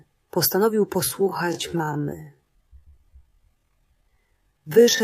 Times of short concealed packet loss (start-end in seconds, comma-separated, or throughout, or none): none